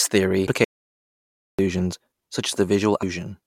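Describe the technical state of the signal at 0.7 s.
At 0.7 s you're right inside a playback stall: the speech cuts out at 0.64 s and stays silent until 1.59 s, a gap of about 0.94 s. Most likely the player starved for data or its thread got blocked, so output simply halted until it recovered.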